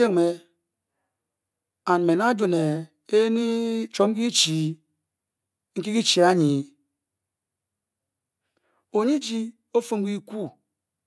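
No faults are audible anywhere in the recording.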